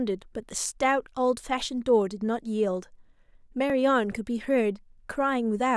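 At 3.70 s the speech skips ahead, likely a dropped buffer (overrun): roughly 7 ms of samples were overwritten before being read, and the remaining audio was spliced straight together.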